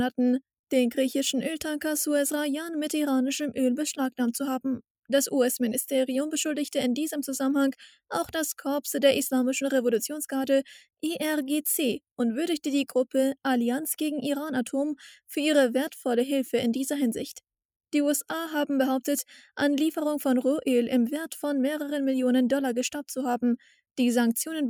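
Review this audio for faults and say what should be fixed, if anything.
No technical faults can be heard anywhere in the recording. Nothing here calls for a fix.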